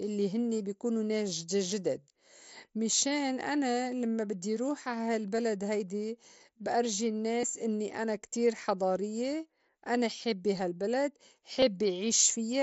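At 5.37 s, after "لمّا بدّي روح عا", then 7.41–7.43 s after "هيدي بأرجي", and 11.60–11.62 s after "حضاريّة أنا حابّة هالبلد", concealed Bluetooth headset packet loss: the receiver refilled each gap of roughly 15–23 ms from recent waveform, leaving a brief buzzy patch and slight warble on resumption.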